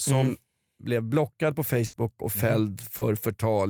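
Around 1.85 s there's a burst of packet loss running to about 1.95 s. Roughly 80 ms of speech never arrived in time, so the receiver stretched the last sound out and faded it. You hear a held, dimming buzz or hiss, then the speech picks up with that stretch gone.

Then at about 2.97 s comes a short concealed packet loss, lasting to around 3.03 s. About 40 ms went missing and got patched by continuing the preceding sound before blending back in, so it comes across as a quick smear or wobble in the speech.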